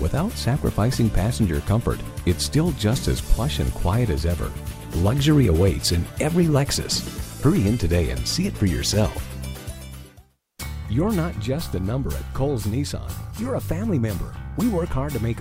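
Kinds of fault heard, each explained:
No faults detected in this clip.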